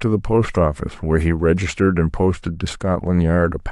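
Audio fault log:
No faults detected.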